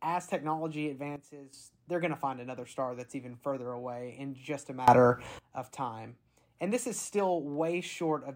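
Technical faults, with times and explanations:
1.16–1.53 s, sudden gain jump: right after "as technology" the level drops by about 12 dB in one step, likely an unramped gain change; the waveform narrows abruptly and the spectrogram dims across all bands, noise floor included.
4.88–5.39 s, sudden gain jump: after "away in just a" everything leaps by about 19 dB, likely a gain setting applied without a ramp; the waveform envelope steps up sharply and the spectrogram brightens uniformly, background noise too.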